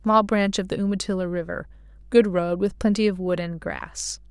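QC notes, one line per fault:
Throughout: mains hum, a steady 50 Hz tone with low harmonics from power-line coupling, likely a ground loop, sitting about 25 dB below the speech.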